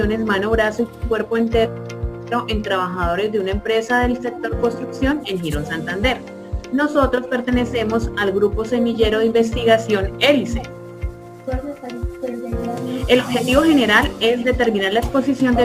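Crude rate conversion runs through the whole clip. Samples were simply dropped, with no filtering. The error pattern suggests a change from 48 kHz to 44.1 kHz. It adds unrelated tones about 30 dB down. These give a gritty, inharmonic fizz that follows loud and high sounds.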